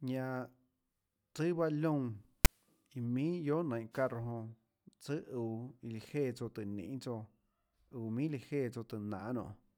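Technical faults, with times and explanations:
2.45 s, file tags played as audio: a short block of text metadata was read as though it were sample values. Text bytes cluster in a narrow positive range, so they decode as a brief, loud rasp offset to one side, heard as a loud snap in the speech.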